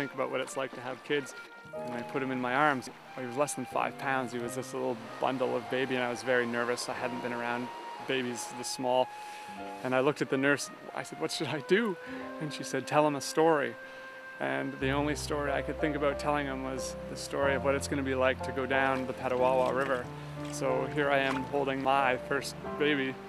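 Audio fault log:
No fault appears in this audio fault log.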